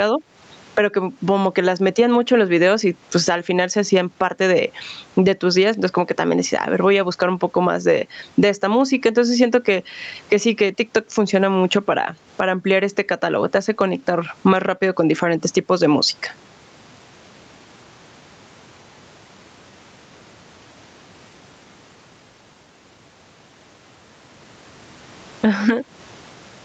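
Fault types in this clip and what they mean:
Gain pumping: the microphone gain was likely set far too high, so a fast limiter clamps down on every loud moment of speech, swinging the level by roughly 15 dB, leaving the speech squashed.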